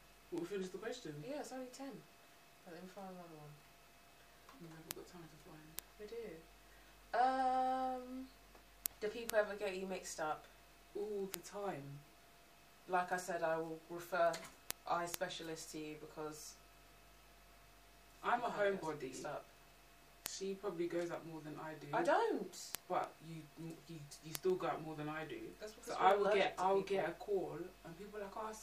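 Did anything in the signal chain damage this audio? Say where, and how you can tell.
Yes. Word clock ticks, from a digital link between devices. From 0.23 s to 28.60 s, sharp ticks of uneven strength recur about every 0.15 s, around two hundred in all. The receiver ran on its own clock, off by something near 150 ppm, so each time the clocks slipped one sample was dropped or repeated. On a spectrogram they show as evenly spaced thin vertical broadband lines, and on the waveform as single-sample discontinuities.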